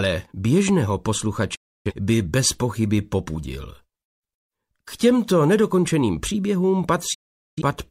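Two digital broadcast dropouts here: the sound mutes from 1.55 to 1.92 s and again from 7.14 to 7.62 s, each with a quick 8 ms fade. The receiver lost good frames and muted, so about 0.3 and 0.43 s of programme are gone, which points to roughly 7 and 10 frames dropped.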